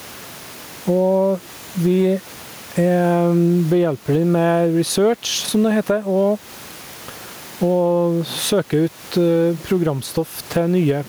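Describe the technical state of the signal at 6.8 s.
At 6.8 s the gain pumping that runs through the whole clip is present. The input gain is likely set far too high, with a fast limiter or compressor clamping down on each loud burst of speech. The level swings by around 10 dB, with the room noise sitting about 32 dB below the speech, leaving loud and soft passages squashed toward the same level.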